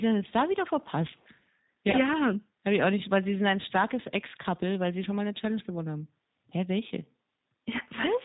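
The whole clip passes through the G.729 codec at 8 kbit/s. It rebuilds the speech from a vocal tract filter, a pitch predictor and a few pulses per frame, and drops everything above 4 kHz. The result is muffled, slightly rough and plainly synthetic throughout.

From 1.91 to 1.96 s, VoIP packet loss concealed by the speech codec occurs. About 20 ms of audio, which fits a single lost packet, was never received. The decoder extended its last pitch and filter with falling gain, so the sound smears into a brief buzzy tone or coloured noise that fades, and stays weak for a moment after packets return.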